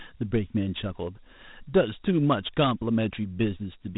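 From start to finish, the speech carries Dialogic VOX ADPCM damage: nothing above about 3.8 kHz, and a gritty hiss riding the speech, which fits a 32 kbps 4-bit coder.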